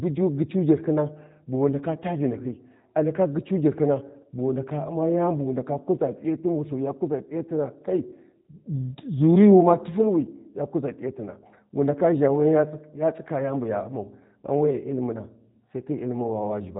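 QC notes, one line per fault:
Throughout: G.729 codec. Speech sounds plainly rough and synthetic, with nothing above 3.8 kHz. Each frame is rebuilt from a filter and a few pulses, which fits 8 kbit/s.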